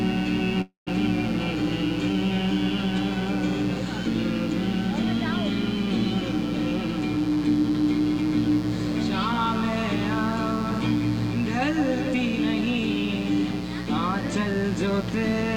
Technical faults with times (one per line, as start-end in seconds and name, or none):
0.00-15.56 mains buzz
0.61-0.89 call audio freeze